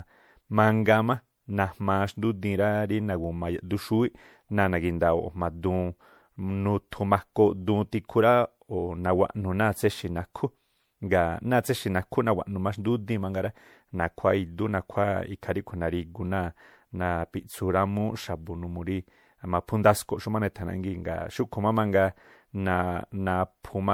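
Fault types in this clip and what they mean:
Generation loss: The speech sounds swirly, smeared and hollow, with blurred attacks. The likely cause is several rounds of lossy encoding, perhaps four, each requantising on a shifted frame grid. That piles up noise and spectral holes, which fits repeated MP3 at around 96 kbit/s.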